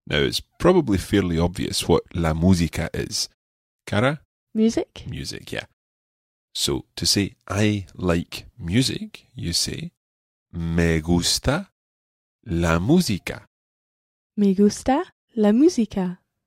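No technical faults can be heard anywhere in this speech recording, and the background dropping to silence in the pauses, with the audio returning in time for the next sound, is normal behaviour.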